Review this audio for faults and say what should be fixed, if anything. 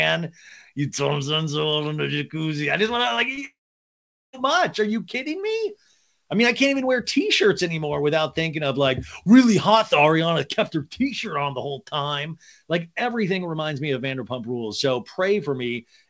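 Brief smears at 3.16 to 3.19 s and 3.35 to 3.39 s are short concealed packet loss: about 20 ms each went missing and the decoder extended the preceding sound to cover it. A larger jitter buffer or forward error correction on the call link would help keep such packets from arriving too late.

From 3.45 to 4.35 s the sound turns into a fading buzz or hiss, then about 0.8 s of silence before resuming, likely a long network dropout that the receiver could only briefly conceal. A more stable network route would prevent this, for example wired rather than congested wireless, or traffic prioritised for the call.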